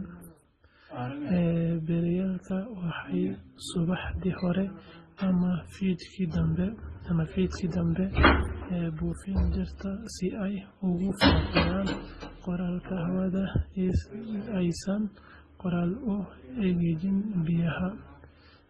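The clip is speech, and across its whole length it carries two different kinds of compression damage at once: the artefacts of two separate codecs heard together, and no content at all above 12 kHz. The likely cause is transcoding between lossy codecs, with a very low-bitrate MP3 stage followed by a low-rate Opus encode that spent its bits re-coding the earlier artefacts and added its own.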